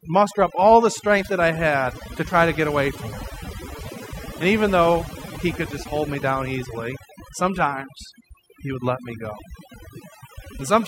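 Throughout the speech, overdone noise removal is audible: bands near the estimated noise floor are pulled almost to nothing, taking quiet voice detail with them. Unlike a noise gate's whole-signal switching, the pauses keep twinkling specks.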